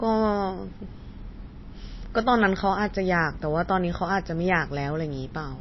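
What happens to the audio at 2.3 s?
At 2.3 s the speech carries the same damage heard across the whole clip, likely MP3 compression: nothing survives above 5.8 kHz, and weak frequency lines flicker between frames, giving a watery, swirly texture and smeared onsets, consistent with a low bitrate around 24 kbps.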